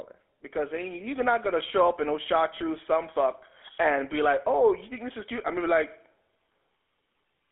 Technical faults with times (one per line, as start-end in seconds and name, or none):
0.00-7.51 GSM full-rate codec